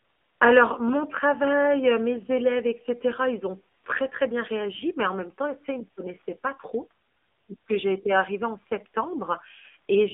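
A speech recording carrying the AMR narrowband mobile codec throughout: the sound is confined to roughly 250 Hz to 3.6 kHz, with a buzzy, synthetic edge that points to AMR-NB at a low rate near 7.4 kbps. A spectrogram shows a hard ceiling, with nothing above 3.6 kHz and little below 250 Hz.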